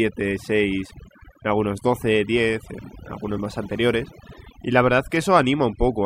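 Across the whole clip the speech carries overdone noise removal. The noise reduction was set too aggressively, so individual frequency bands that sit close to the estimated noise floor are pulled far down or switched off entirely, and the quieter components of the voice are removed along with the noise. Between phrases the background collapses to near silence scattered with twinkling, chirpy specks.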